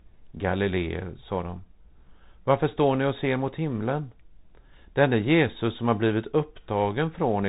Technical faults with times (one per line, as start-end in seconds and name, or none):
0.00-7.49 Bluetooth CVSD headset codec